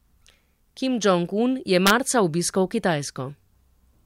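From 1.87 to 1.90 s, the speech hits integer overflow. Peaks pushed about 2 dB past the largest integer and wrapped to the opposite sign instead of being limited. Each overshoot flips across the full range. It sounds like a violent crack, far harsher than clipping.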